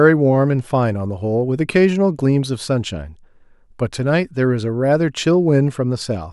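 No technical faults can be heard anywhere in the speech recording, with the signal remaining continuous and steady throughout.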